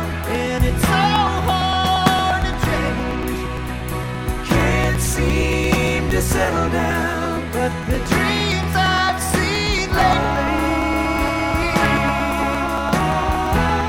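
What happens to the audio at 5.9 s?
At 5.9 s the audio sits inside a run of periodic USB or driver dropouts lasting from 0.12 s to 13.81 s. Every 0.115 s something stalls the USB bus or audio driver, and about 10 ms of signal is skipped outright. The result is an evenly spaced ticking or popping that is audible wherever sound is present.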